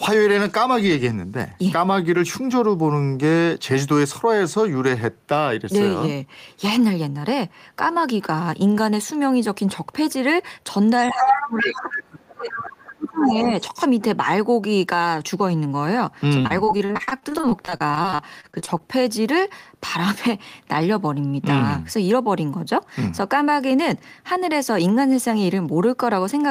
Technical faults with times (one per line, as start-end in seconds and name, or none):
11.07-11.91 other side's voice leaking through
11.09-13.53 speech suppressed in double talk
12.86-12.93 other side's voice leaking through
13.20-13.63 other side's voice leaking through
16.41-18.81 repeated packet loss (robotic sound)